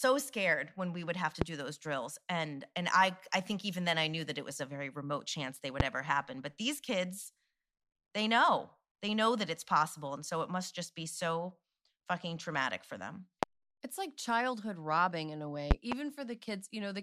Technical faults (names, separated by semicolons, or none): loud pop